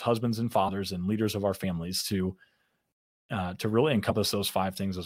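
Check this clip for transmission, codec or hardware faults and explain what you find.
Compressed frames skipped, three times: at 0.61 to 0.70 s just before "and leaders of our", at 1.63 s just after "and leaders of our", and at 4.09 to 4.16 s after "uh to really". Roughly 20 ms, 20 ms and 50 ms of audio vanish as the decoder loses or rejects whole frames.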